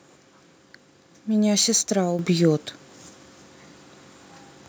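Sample clock jitter runs through the whole clip. The converter's timing wanders by a few microseconds, so samples land slightly off their proper instants, leaving an error roughly 30 dB below the speech that is heard as a grainy hiss on louder, brighter syllables and disappears in pauses.

At 2.19 s the microphone volume is stepped up by about 7 dB in a single jump. The software raised the input gain at once instead of ramping it, so the speech and the background noise both become abruptly louder together.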